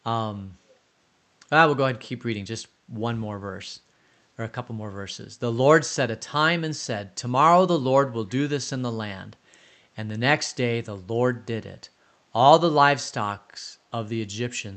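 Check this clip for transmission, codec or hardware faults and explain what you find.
One fault is present, a brief echo leak. At 0.69 to 0.73 s, a faint, delayed copy of the speech returns for about 40 ms, arriving roughly 345 ms behind the original and sitting very far below it in level. This is likely residual echo: the far end's loudspeaker output reached its microphone, and the echo canceller let a trace through to be sent back. It sounds like a barely audible ghost under the band-limited call audio.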